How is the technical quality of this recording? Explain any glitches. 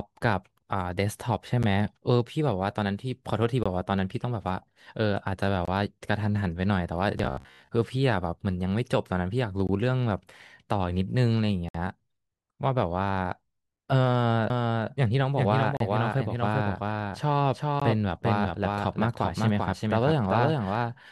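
The recording has three kinds of fault: regular dropouts, a short robotic stretch, and a doubled track toward the end.

Gap between stream segments: at 1.63, 3.63–3.66, 5.65–5.68, 9.67, 11.69–11.75, 15.77–15.80 and 17.80 s, the timestamps of consecutive segments, which arrive about every 2 s, leave small holes. The player fills each hole with silence, so the speech cuts out abruptly for 10 to 59 ms.

Robotic sound from repeated short buffers: from 7.18 to 7.72 s, new audio likely arrived too seldom, and the software looped the last snippet, which fits a buffer of about 15 ms. Most of the real speech there is skipped, and the repeats impose a rigid, metallic 66.7 Hz buzz.

Doubled audio track: from 14.50 s to the end, the same speech is likely mixed in a second time through a slower path. A full-band copy trails about 400 ms behind and sits about 5 dB quieter. It enters abruptly and has no room colour.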